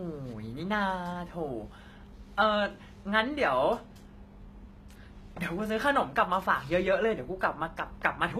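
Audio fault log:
throughout: HE-AAC compression. The treble sounds rebuilt rather than real, and s sounds turn gritty and metallic. This is likely spectral band replication at a low bitrate, which fits around 20 kbps.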